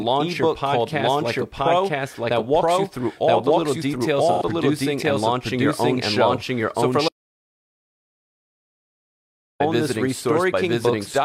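Doubled audio track, throughout: a full-band second copy trails by about a second at roughly equal level, dry and abrupt, likely from a second, slower capture path.

AAC frame loss with concealment, 4.32 to 4.42 s: about 85 ms, consistent with two lost frames, is rebuilt from the last good spectrum and sounds like a brief smeared, phasey patch.

Audio dropout to silence, 7.09 to 9.60 s: the sound cuts to silence with no room tone for about 2.5 s, likely because the input was lost while recording continued.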